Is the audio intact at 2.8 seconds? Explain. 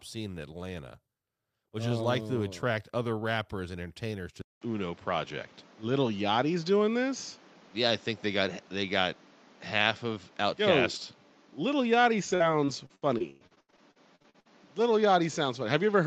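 Yes, the speech at 2.8 seconds plays through cleanly, with no dropout, click, distortion or other fault at that moment.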